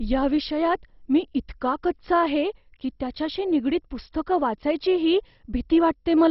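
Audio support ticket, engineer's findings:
Dull, band-limited speech throughout, upper bands missing; gurgling, granular distortion, upper bands flickering on and off. Likely MP2 compression, heavily starved, rate fitting about 32 kbps. Sub-band dropout and coarse quantisation, unlike plain low-pass filtering, which stays clean.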